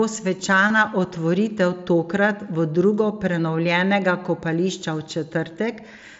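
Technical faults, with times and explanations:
0.68–0.70 s, concealed Bluetooth headset packet loss: a brief buzzy held tone with a slight warble at recovery, as the receiver repeated recent waveform across what fits three lost packets.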